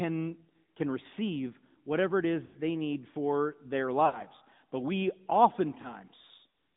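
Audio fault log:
Throughout: AMR narrowband mobile codec. The speech was squeezed through the 2G/3G mobile codec, which rebuilds the voice from a vocal-tract model and a few pulses, so only a 150 Hz to 3.7 kHz band survives. The plainly buzzy, synthetic edge fits a mid rate near 10.2 kbps.
2.46–2.56, 4.06–4.21 and 5.82–5.95: lost AMR speech frames. Radio errors corrupted frames, so the decoder repeated the last good pitch and vocal-tract settings at falling gain. The first two gaps, which fit about 80 ms of lost frames, smear and fade. The last is a brief single-frame dip.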